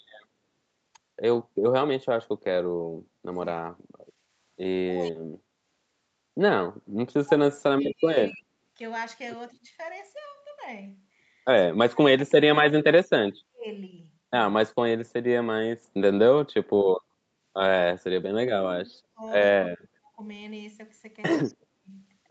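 A speech recording with speech suppressed in double talk at 3.55–5.43, 7.23–9.72, 11.67–13.67 and 16.43–21.94 s. The voice dips by up to about 40 dB in patches, which shows as holes in the waveform envelope and blanked bands on a spectrogram, likely an echo canceller ducking the talker while the far side spoke. Brief echo leaks at 7.84 and 21.5 s repeat the voice 198 ms late, at about 10 dB and about 30 dB below it, visible as delayed smears.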